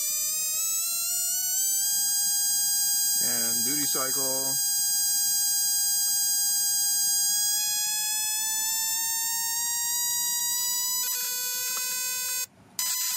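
Short glitches at 1.41, 4.42 and 7.51 s and 10.39 to 10.41 s are corrupt frames decoded: flipped bits misplace energy, leaving narrow vertical smears on a spectrogram.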